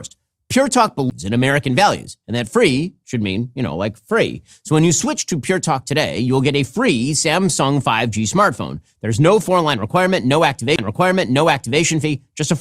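A tick and an abrupt jump in the speech at 1.10 s, then again from 10.76 to 10.79 s just after "no four", with brief mutes of about 10 and 30 ms: CD skips, where the laser leapt to another turn of the disc's spiral.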